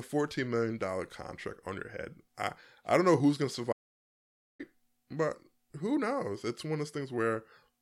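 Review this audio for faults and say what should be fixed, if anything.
Audio dropout to silence from 3.73 to 4.60 s: after "know who's going to" the speech cuts out mid-flow into silence, with no room tone, and resumes at "but who knows". About 0.87 s of speech is missing. The likely cause is the input signal vanishing, through a disconnected device, a failed link or an accidental mute, while the recorder kept writing silence. To prevent it, secure cables and connections and monitor input levels live during recording.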